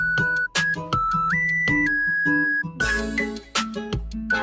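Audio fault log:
throughout: noise suppressor applied to music or sounds. A speech-tuned suppressor treats sustained tones and tails as noise and pulls them down by around 5 dB while onsets pass, so the sound pumps. The waveform envelope breathes, and the spectrogram shows held partials fading between attacks, all below the 8 kHz ceiling.
3.39–3.55 s: sound cut by the noise suppressor. For about 0.16 s the suppressor mistakes this passage for noise and drops it by up to about 11 dB, so it sinks. The waveform shows a sudden dip, and the spectrogram a dark vertical band.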